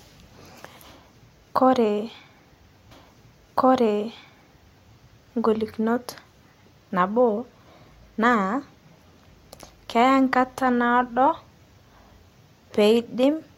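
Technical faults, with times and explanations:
2.90 to 4.93 s, stream segment repeated: about 2.02 s of the speech plays a second time after a small blip at the jump back, because the player queued the same segment twice. Unlike a stutter, the whole passage repeats intact and nothing is lost.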